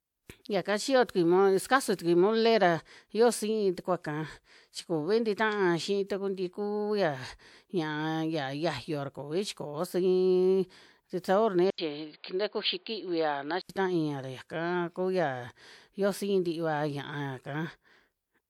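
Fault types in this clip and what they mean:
Pre-echo: A transform codec spread its quantisation noise across the whole block, so noise meant for a loud attack leaks into the quiet just before it. From 11.20 to 11.24 s, a hiss of about 42 ms precedes "sabor nia", smearing its onset.
Input switched to a poorer device: From 11.70 to 13.69 s, between "sabor nia" and "ra yaka kuya", the audio narrows to nothing above 4.8 kHz, with an 80 ms gap at the switch, new background noise around 35 dB below the signal, and no noticeable level change, likely from a device change.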